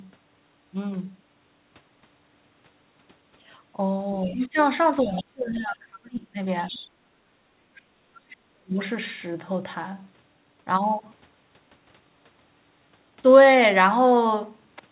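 A speech clip from a call, band-limited near 4 kHz, which fits a narrowband telephone codec. The other side's voice leaking through is heard at 4.15–4.62, 5.0–5.58, 6.63–6.88, 7.75–7.82 and 8.14–8.19 s. The first is only about 10 dB under the talker. The last two are very faint. The likely cause is loudspeaker echo the canceller missed. Speech is suppressed in double talk at 4.26–4.57, 5.02–6.37 and 8.22–8.77 s. The talker's voice sinks by roughly 15, 30 and 40 dB. It stays turned down for most of each span. Here the canceller likely cannot separate the two voices, so it turns both down.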